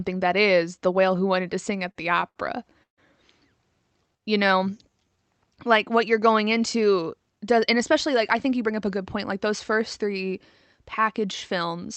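From 1.88 to 2.99 s the sound stutters through six repeated stalls, a stutter caused by packets arriving too late for the jitter buffer. Each time it ran dry, the receiver stretched out the last sound, filling about 290 ms in all, with the longest gap at 145 ms. Nothing is lost, but a quarter of that stretch is filler. On a spectrogram the filled gaps show as smeared, static harmonic bands, and on the waveform as repeated or fading cycles.

Between 4.06 and 5.17 s, just before "like what you're going", a jitter buffer slow-down adds 152 ms. The receiver repeated single pitch periods to rebuild its reserve, so the audio plays at 87% speed with the same pitch and drawn-out sounds. The waveform shows repeated cycles, and the spectrogram shows widened, unchanged harmonics.

After "like what you're going", from 7.06 to 9.71 s, a jitter buffer speed-up removes roughly 150 ms of pitch periods to cut excess delay. 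The sound runs about 6% fast at the same pitch and seems slightly hurried. On the spectrogram the features are compressed in time without any shift in frequency, below a band edge at 8 kHz that fits the Opus call path.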